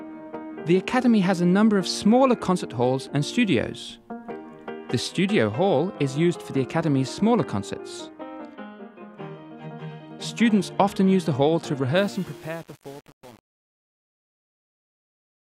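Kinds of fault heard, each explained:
Truncation distortion on a fade: the fade-out from about 12 s is carried at only 7 bits with no dither, so as the level drops toward the smallest step the waveform collapses into coarse square steps, turning the tail gritty through to 15.57 s.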